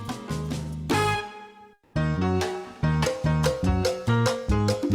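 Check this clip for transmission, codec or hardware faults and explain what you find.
One fault. Comfort noise in place of the background, 1.75 to 1.93 s: likely Opus discontinuous transmission pausing, so the receiver substitutes steady, featureless noise for about 180 ms, roughly 9 dB quieter.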